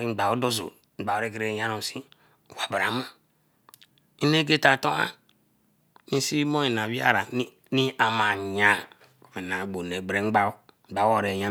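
Nothing stood out as a technical problem anywhere in this speech recording on listening.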